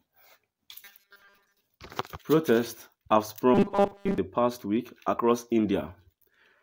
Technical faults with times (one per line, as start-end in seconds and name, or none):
0.84-1.60 robotic sound from repeated short buffers
3.54-4.18 robotic sound from repeated short buffers